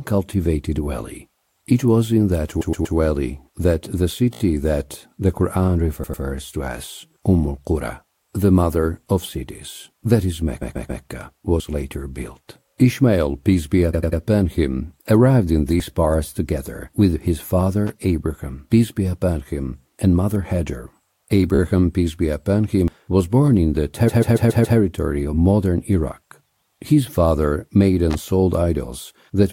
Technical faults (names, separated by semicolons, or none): repeated frames; dropped buffer (overrun); loose connector crackle